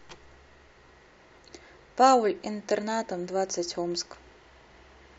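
Overlap between stream segments produces a tiny skip in this speech at about 1.38 s. Two segment time stamps overlapped, so the player discarded roughly 6 ms of audio that was never actually duplicated, and the waveform jumps across the gap.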